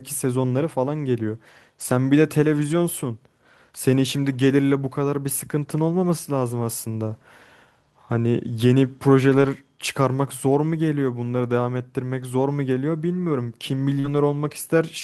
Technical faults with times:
9.29-9.47 lost packet rebuilt from error correction
13.99-14.06 short concealed packet loss
14.04 lost packet rebuilt from error correction

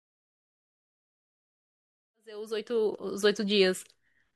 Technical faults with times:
none

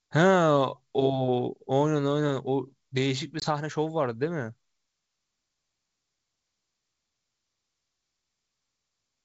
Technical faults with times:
3.40-3.46 packet loss on an ADPCM call

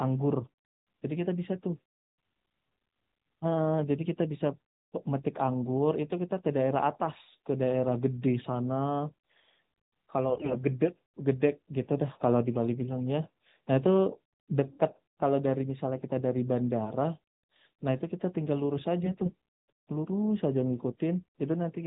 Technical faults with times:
10.30-10.62 AMR bit errors
19.04-19.33 AMR bit errors

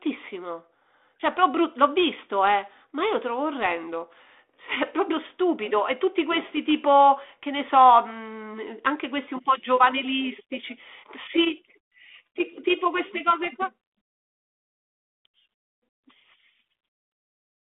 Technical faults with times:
none

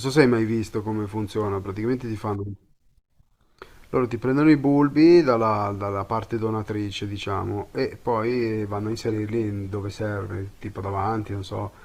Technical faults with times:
8.26-11.84 adaptive stream at a lower bitrate

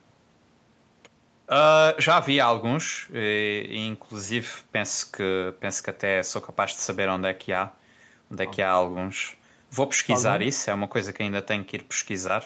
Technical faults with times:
none

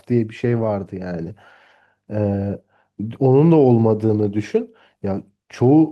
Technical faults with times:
none

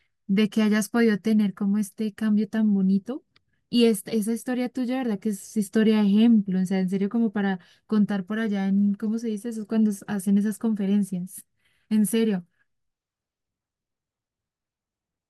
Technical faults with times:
none

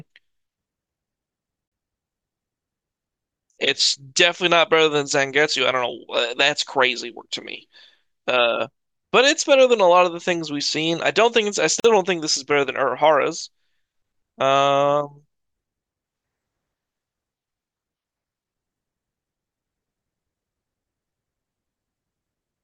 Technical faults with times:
1.68-1.72 gap at a join of encoded pieces
11.80-11.84 gap at a join of encoded pieces

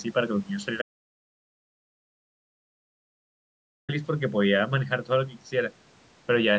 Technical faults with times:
0.82-3.89 audio dropout to silence

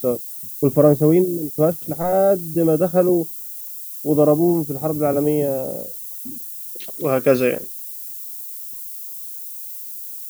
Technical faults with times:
0.00-10.29 low bit depth with noise shaping

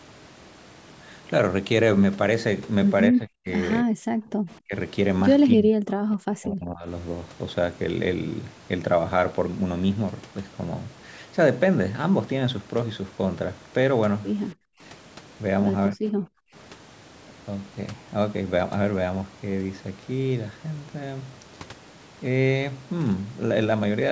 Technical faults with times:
3.11-3.48 speech suppressed in double talk
3.83-3.99 speech suppressed in double talk
4.27-4.35 background gated by the echo canceller
4.63-4.75 speech suppressed in double talk
5.50-6.86 speech suppressed in double talk
14.55-14.80 background gated by the echo canceller
15.96-16.04 speech suppressed in double talk
16.32-16.53 background gated by the echo canceller

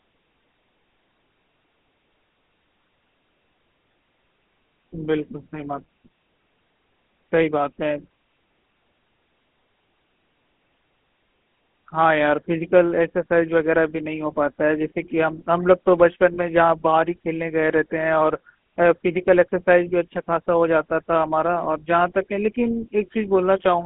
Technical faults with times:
0.00-23.86 GSM full-rate codec
16.34-16.38 lost GSM frames

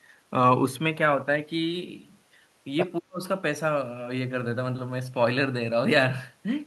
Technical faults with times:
2.97-3.22 speech suppressed in double talk

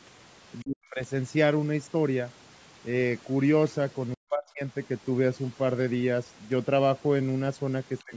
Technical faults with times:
0.00-8.16 overdone noise removal
0.63-1.02 speech suppressed in double talk
4.15-4.63 speech suppressed in double talk
7.99-8.04 other side's voice leaking through
8.04-8.16 speech suppressed in double talk

